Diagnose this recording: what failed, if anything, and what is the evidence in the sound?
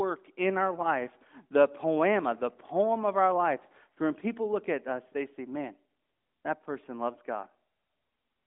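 Nothing failed here: the speech has the narrow, phone-line character of the AMR narrowband mobile codec working as intended, with the band sitting roughly between 200 Hz and 3.6 kHz and only the light coding texture you'd expect from a 12.2 kbps AMR-NB link.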